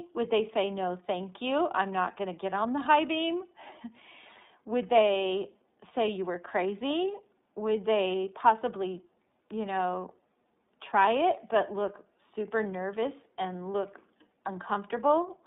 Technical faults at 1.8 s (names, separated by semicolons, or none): iLBC codec